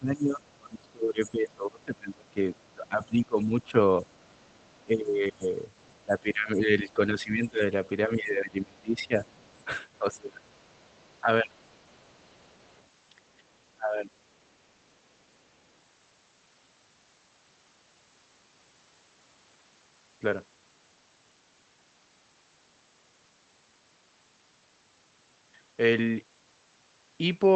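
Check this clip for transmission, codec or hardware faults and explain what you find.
Three echo-canceller faults turn up, concentrated in the first 14 seconds of this speech clip. All of it sits on top of an Opus call path whose audio stops at about 8 kHz.

Speech suppressed in double talk runs from 0.0 to 11.57 s, with about 7 s of it audibly affected, and again from 13.77 to 14.11 s. The talker dips by around 25 dB at worst, and by around 20 dB in the later spot. The likely cause is the canceller failing to separate near-end speech from echo while both sides talked, so it attenuated everything.

The other side's voice leaks through at 0.49–0.54, 2.55–2.73, 4.11–4.83, 5.79–5.98 and 9.27–12.85 s. It is faint, roughly 40 dB below the talker, and closer to 35 dB down at 5.79 s. This is likely residual loudspeaker echo that the canceller didn't fully remove from the microphone signal.

The background is gated by the echo canceller from 13.25 to 13.49 s. 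The room tone drops by about 13 dB for roughly 200 ms and then recovers. The canceller clamped the microphone hard while the loudspeaker was active and released it afterwards.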